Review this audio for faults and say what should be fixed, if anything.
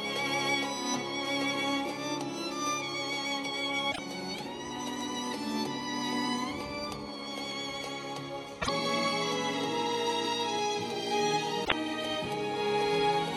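Damaged data in the compressed stream appears three times, at 3.88 to 3.99 s, 8.58 to 8.69 s and 11.61 to 11.72 s, each a brief disruption of about 0.11 s. Corrupted bytes there make the decoder misread frames and lose sync until it finds the next valid frame header. To fix it, re-fetch or re-encode from an intact source and verify the file with checksums so transfer or storage errors are caught.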